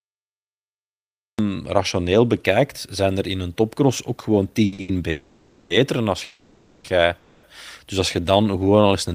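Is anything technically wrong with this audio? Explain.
Yes. The speech has four kinds of fault.

Cut-off start: the clip is digital silence until 1.39 s. Speech then begins abruptly, mid-sound, because recording started late.

Short stall from a late packet: right after "een topcross ook gewoon", sound is held at 4.65–4.73, 4.73–4.79 and 4.81–4.89 s. Each hold lasts 50–70 ms. Late packets emptied the jitter buffer, so the last sound was stretched.

Call audio freeze: at 5.10–5.71, 6.24–6.85 and 7.17–7.44 s, sound hangs as a fading buzz for 0.6, 0.6 and 0.26 s. Speech then resumes where it stopped. This is likely delayed packets draining the jitter buffer.

Jitter buffer slow-down: between "als je" and "eens een tiende kunt", 8.20–8.88 s, speech plays at about 83% speed at unchanged pitch. The receiver repeated pitch periods to rebuild its reserve, adding 124 ms.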